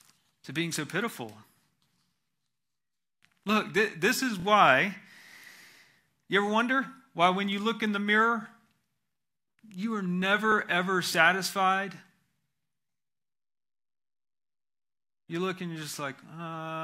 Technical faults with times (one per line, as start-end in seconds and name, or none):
4.39-4.44 repeated frames
10.51-10.54 repeated frames